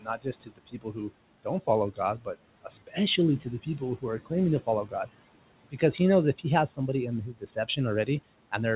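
A speech recording with noise suppressor artifacts running all the way through. The suppressor pulls the background down by about 18 dB, frame by frame, in whichever bands it judges to be steady noise. So the room noise, sitting about 18 dB under the voice, dips in the gaps and swells back under the speech. There is also speech cut by the noise suppressor, in five places. These are 0.01 to 1.11 s, 1.92 to 2.27 s, 2.64 to 2.96 s, 3.4 to 5.08 s and 7.33 to 8.08 s. In each, the suppressor mistook quiet parts of the speech for noise and turned them down with it. The drops reach about 18 dB in the first stretch and about 10 to 15 dB in the others. Only short parts of each span are hit, around half a second in the first, under a third of a second in the fourth, a tenth or so in the second and third, and about 0.15 s in the last. Those parts sound swallowed or faint. Nothing reaches above 4 kHz, which fits a G.711 mu-law call codec at 64 kbps.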